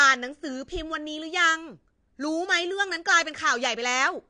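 Throughout, the speech sounds dull and fizzy, with nothing above 9.8 kHz. This is likely AAC compression, and the cut-off and warble point to roughly 32 kbps.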